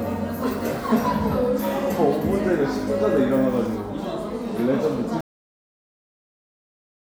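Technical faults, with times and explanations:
5.21 to 7.13 s, cut-off end: the sound stops mid-event at 5.21 s and drops straight to digital silence for the rest of the clip, because the final buffers were never written or played. Unlike a fade-out there is no decay, and unlike a dropout nothing resumes.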